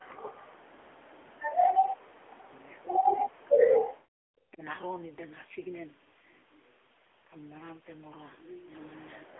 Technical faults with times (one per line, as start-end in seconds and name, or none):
0.00-9.40 AMR narrowband mobile codec
4.13-4.18 speech suppressed in double talk
4.53-4.63 speech suppressed in double talk